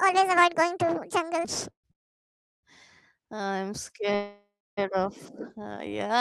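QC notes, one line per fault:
0.00–1.45 s, section at the wrong speed: the opening runs at about 1.69 times normal speed, so everything is hurried and lifted around ten semitones, high and chipmunky. Pitch and tempo climb together and then snap back to normal just after 1.45 s, which points to this stretch likely having been played or edited against the wrong clock rather than to anything in the source itself.
1.70–1.86 s, 1.92–2.65 s and 4.15–4.79 s, call audio freeze: three stalls where the sound smears into a fading buzz and then drops out. The first adds 139 ms and goes silent for about 100 ms. The second adds 715 ms, nearly 690 ms of it dead air. The third adds 622 ms with about 270 ms of silence. Afterwards the audio picks up exactly where it left off and nothing is skipped, which is the signature of late packets draining the jitter buffer, likely on the network side.
5.58–5.89 s, jitter buffer slow-down: this stretch drags to about 87% speed while the pitch stays put, so sounds come out drawn-out. 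The receiver is repeating single pitch periods or bits of pauses back to back to stretch the audio by about 48 ms, rebuilding its reserve.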